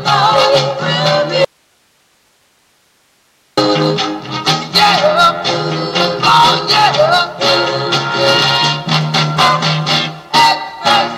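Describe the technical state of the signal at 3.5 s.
At 3.5 s the signal is in an audio dropout to a faint residue, running from 1.45 to 3.57 s. Only hiss about 40 dB below normal level remains, likely because the signal was lost while the path stayed live. The abrupt edges set it apart from a fade.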